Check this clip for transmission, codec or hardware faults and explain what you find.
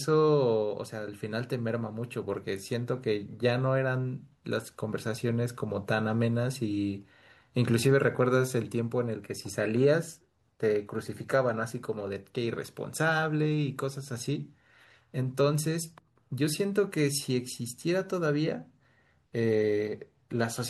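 No faults detected here.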